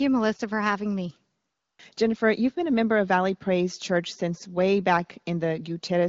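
Speech over HD Voice wideband; no faults heard.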